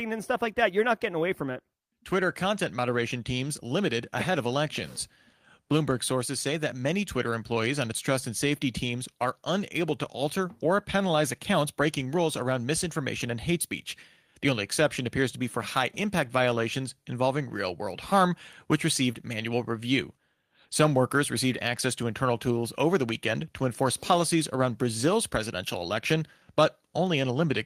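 No technical faults can be heard anywhere in the recording; the signal stays continuous and steady throughout.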